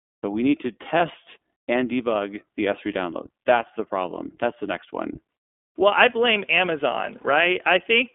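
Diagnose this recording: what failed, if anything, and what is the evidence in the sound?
The speech passed through the iLBC codec at the codec stage. It is a narrowband coder, and the line band runs from about 250 Hz to 3.5 kHz, so nothing above that reaches the listener. The damage is plainly audible throughout: the voice is intelligible but sounds slightly rough and synthetic, because each short frame's excitation is coded on its own. The coding fits iLBC's 20 ms frame mode at roughly 15 kbps.

Lost iLBC frames point to packet loss on the network. The first gap falls from 0.98 to 1.01 s, just after "we need to". The second runs from 7.22 to 7.26 s. Each gap is consistent with a single missing 20 ms frame. The decoder concealed each loss by repeating the last pitch cycle blended with noise, which is heard as a brief held, faintly buzzy vowel. Because iLBC frames are independent, the voice recovers almost immediately afterwards.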